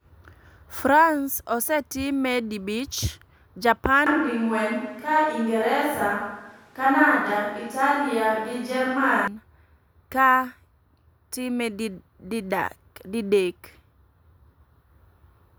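A speech recording in which, from 4.06 to 9.28 s, the sound abruptly turns roomy and hollow with thinner bass, a likely switch to a distant microphone. Level barely changes, but room noise rises to roughly 35 dB below the speech, and on a spectrogram reverberant tails smear between syllables over a lifted noise floor.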